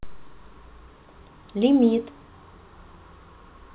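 Speech carried over a narrowband call path, with nothing above 4 kHz as a G.711-style telephone codec would leave it, and no technical faults to report.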